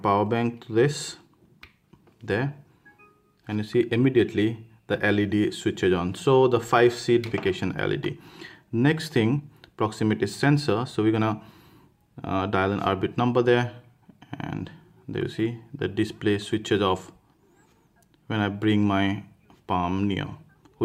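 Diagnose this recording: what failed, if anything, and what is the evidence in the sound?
The fault is at the network and jitter-buffer stage. At 7.31 s playback jumps forward with no gap and no fill. About a second of audio is gone, and the material on either side is butted together almost directly. This is a skip ahead: a late stretch was discarded, likely when the jitter buffer overflowed, while newer audio was already queued. Unlike a dropout or packet-loss concealment, nothing replaces the missing part. There is no silence, no smeared repeat, just an abrupt continuity break.

Shortly after, the same buffer applies a jitter buffer speed-up in three bursts: 8.70 to 10.04 s, 10.46 to 11.28 s, and 11.96 to 13.53 s. Each runs at 108% speed, trimming roughly a tenth, under a tenth, and about a seventh of a second respectively. The receiver cuts short pitch-period-sized slices repeatedly to drain excess delay, so the sound feels hurried while its pitch stays put. 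That unchanged pitch separates it from a sample-rate mismatch, which would raise pitch along with tempo.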